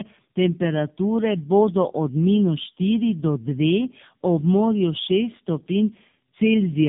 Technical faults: tandem speech coding

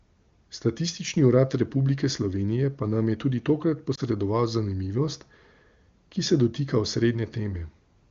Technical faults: lost AMR speech frames

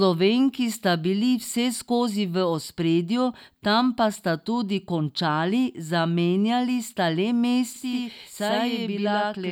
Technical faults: channel delay (doubling)

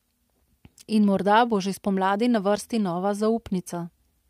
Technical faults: none

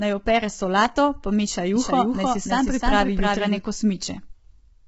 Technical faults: low-delay AAC compression; doubled audio track

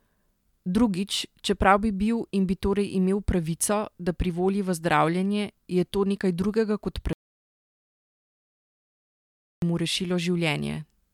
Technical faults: audio dropout to silence

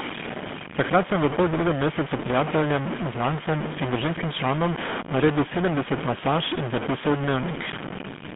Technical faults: stuck bit; GSM full-rate codec

